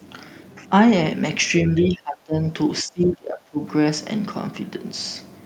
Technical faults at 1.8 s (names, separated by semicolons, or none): speech suppressed in double talk; other side's voice leaking through